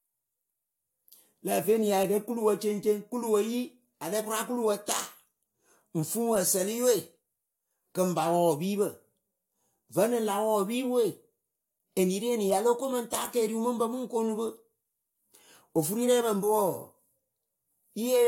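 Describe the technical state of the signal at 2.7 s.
At 2.7 s the speech signal is intact, with no audible technical fault at that moment.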